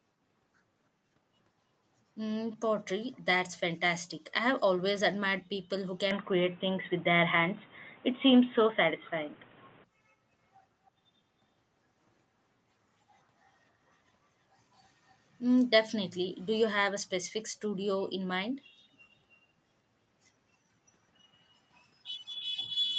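From 6.1 to 9.8 s, speech turns boxy, likely from an input switched to a poorer device: the spectrogram's band narrows and the waveform level shifts about 5 dB.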